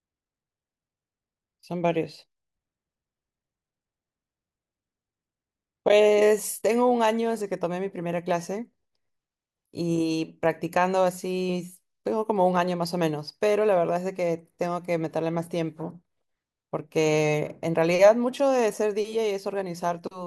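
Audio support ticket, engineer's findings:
Listened through the speech recording and nothing stood out; no symptoms to log against any component.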